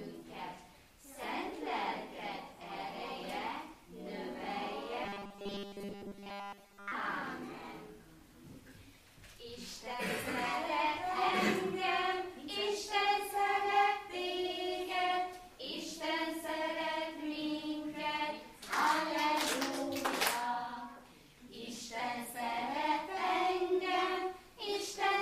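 From 5.04 to 6.92 s the sound turns into a rigid, metallic buzz at 200 Hz, robotic sound from repeated short buffers, likely from audio arriving too seldom so 5 ms slices repeat through most of the stretch. Unlike plain dropouts, nothing goes silent.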